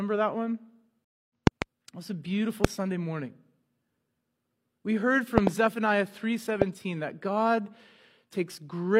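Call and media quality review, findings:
Stream reconnect at 1.05 to 1.3 s, after "that one". Silence of 255 ms. Playback resumes roughly 0.15 s further on, so a short stretch is skipped. Player connection dropped, then a fresh decoder restarted mid-stream.

Loud pops at 1.47 to 1.64 s (double), 2.65 to 2.67 s after "was a beautiful" (single), 5.38 to 5.49 s (double) and 6.62 to 6.64 s (single). Peaks about 25 dB above the speech, which continues underneath. Likely cause: voltage spikes from hardware or a driver glitch.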